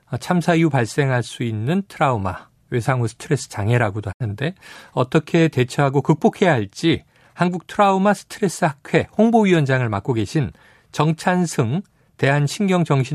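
At 4.11 s the receiver stops getting usable frames, a digital broadcast dropout, and mutes until clean data returns at about 4.22 s. The speech fades out over roughly 20 ms into a gap of about 72 ms, consistent with three lost frames.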